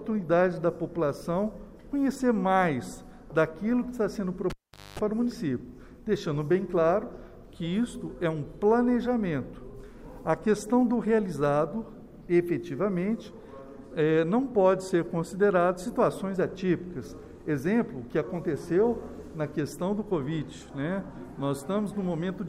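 At 4.5 s a live cable is pulled and plugged in. A pop, near silence, then 0.24 s of 50 Hz mains buzz. Another pop at 4.99 s.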